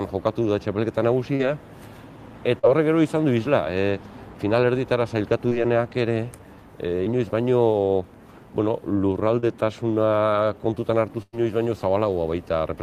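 Short concealed packet loss hits at 1.35, 2.59, 5.49, 7.05 and 9.40 s. Each time, 20 to 40 ms of audio arrived too late. The receiver extended the preceding sound to cover the hole. Each one is a brief smear or wobble.

A burst of packet loss follows from 11.22 to 11.35 s. About 100 ms never arrived. The receiver stretched the last sound across the gap while fading it, ending in about 30 ms of silence. A held buzz or hiss is heard, then the audio resumes further along.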